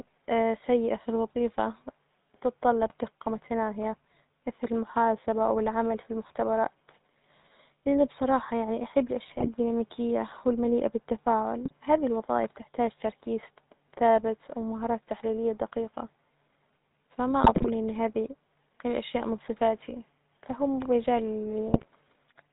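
The whole recording carries the sound of the GSM full-rate codec. The damage is plainly audible. Nothing reaches above 4 kHz, so the top end is gone. The voice has a buzzy, gravelly edge. This comes from the codec's method. It models the vocal tract and drives that model with evenly spaced pulses. Only a third of the excitation detail survives. The sound fits the 13 kbps full-rate coder.

GSM bit errors break in five times: at 2.86 to 2.94 s, 9.28 to 9.49 s, 11.62 to 11.73 s, 17.44 to 17.69 s, and 21.68 to 21.86 s. Each burst sounds like squawks, pops and gargling. Corrupted bits reached the decoder as wrong filter, pitch or gain values. The spectrum bends, or the level jumps, frame after frame while each burst lasts. The bursts at 9.28 s and 17.44 s last longest.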